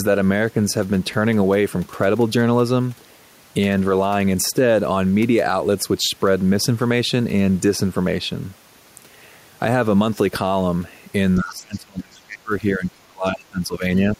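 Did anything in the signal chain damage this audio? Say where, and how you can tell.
Yes, in call processing. Speech drops by up to about 30 dB from 11.39 to 13.83 s and at 14.15 s, showing as waveform gaps and faded spectrogram bands. The likely cause is speech suppressed in double talk, where the echo canceller turns the talker down.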